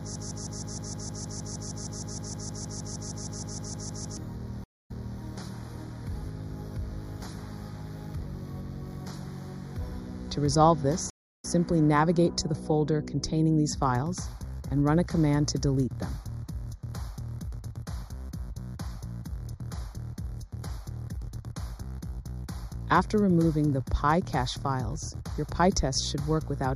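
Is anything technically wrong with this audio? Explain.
Yes, there are four problems.

Throughout, the audio sounds hollow and phasey, with a notch around 3 kHz. This is channel delay (comb filtering): one channel lags by a fraction of a millisecond, and summing to mono cancels evenly spaced frequencies.

From the very start to 4.17 s, a 0.16 s fragment repeats back to back 26 times, and the intended audio is lost. This broken-record loop was likely caused by a stalled player or stream resending its last buffer.

From 4.64 to 5.20 s, the sound drops into a 0.24 s silence, then resumes 0.31 s earlier than where it stopped. This is a stream reconnect, with the server resending a burst of already-played audio to a fresh decoder.

A second stream reconnect runs from 11.10 to 11.45 s. After a 0.32 s gap, the audio picks up roughly a third of a second later, skipping that material.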